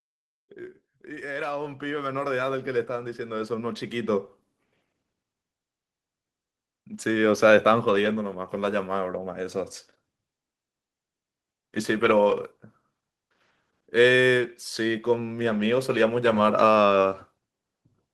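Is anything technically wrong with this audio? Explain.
Yes. Automatic gain rising runs from 0.37 to 4.3 s: the gain control judged the incoming speech too quiet and stepped its gain up by about 17 dB over roughly four seconds, so the voice and the background noise swell louder together.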